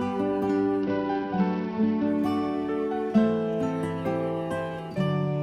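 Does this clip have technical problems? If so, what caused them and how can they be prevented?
Yes. From 0.82 to 2.07 s, a Bluetooth SBC bit pool drop starves the upper sub-bands and coarsens the rest, so the treble dulls and gritty noise rises. This fits a fall from bit pool 31 to about 9, near 72 kbps. To prevent it, reduce radio congestion by keeping the devices close and clear of competing 2.4 GHz traffic.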